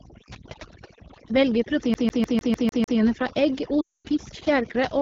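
A speech recording whose background drops to near-silent gaps sprinkled with twinkling specks throughout. This is overdone noise removal, where aggressive suppression removed quiet parts of the voice along with the background noise. The speech is also rough and raspy, with plainly audible coding damage. That is the AMR wideband (HD Voice) codec running at a low rate, likely 8.85 kbit/s, where its pulse-driven model of the vocal tract breaks down. From 1.94 to 2.99 s, just before "fra egg", a 0.15 s fragment repeats seven times in a fast, even stutter with a brief mute at each jump. This is a CD stuck on one turn, with the laser jumping back to the same spot on every revolution. From 3.81 to 4.08 s, between "fra egg" and "fisk fjærkre", the sound drops to near silence for about 240 ms. This comes from lost AMR speech frames, as the decoder reused the last good settings at falling gain, and the gap fits roughly a dozen 20 ms frames.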